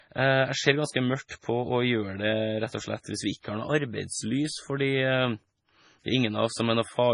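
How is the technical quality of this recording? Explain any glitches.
Technically it's pretty rough, with heavy lossy coding across the whole clip and one smeared attack.

The MP3 compression runs throughout. Nothing reaches above 10.5 kHz, and the speech has that watery, swirly quality as weak frequency lines flicker in and out frame to frame. It's likely an MP3 encode starved of bits, which fits a very low bitrate of around 24 kbps.

Pre-echo shows up from 3.40 to 3.44 s, just after "hvis vi". A short hiss creeps in about 43 ms ahead of a sharp onset, which then sounds softened. The codec spread the noise budgeted for the loud attack across its whole block, so the quiet lead-in got filled too.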